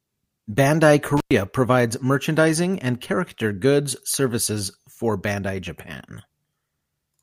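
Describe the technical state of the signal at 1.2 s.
At 1.2 s the speech drops out from an intermittent contact, spanning 1.17 to 1.32 s just before "provides merchandising and character". A loose connection opens for about 106 ms, so the signal cuts out with crackle at both edges and only faint hiss remaining.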